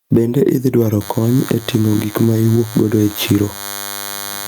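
Throughout this speech recording the level swings by around 15 dB, leaving the speech squashed and flat in level. That is gain pumping, likely from input gain set far too high with a fast limiter or compressor clamping down on each peak. From 1.01 s to the end a steady, thin buzz sits well below the speech, roughly 25 dB down. It is DECT cordless phone buzz: a nearby handset or base station sends a radio burst every 10 ms, and the audio circuitry rectifies it into a 100 Hz tone with many harmonics.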